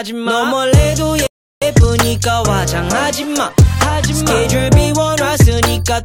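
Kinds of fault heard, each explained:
Rebuffering stall: at 1.27 s the audio stops dead and stays silent until 1.62 s, then picks up exactly where it left off. The player ran out of downloaded data and waited for more, so nothing is lost but 0.35 s is added.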